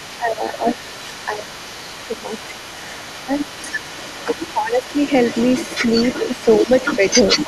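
From the start at 0.0 s to the end at 7.47 s, a second, fainter voice runs under the main speech, roughly 10 dB down. This is the other side's voice leaking through, likely because the echo canceller left part of the loudspeaker playback in the microphone signal.

The main talker also dips or breaks up at 0.18–0.87 s, 1.27–2.68 s, 3.24–3.75 s, 4.52–4.84 s and 6.28–7.03 s, falling by around 10 to 20 dB at worst. This is speech suppressed in double talk, likely from the canceller turning everything down when both sides talked at once.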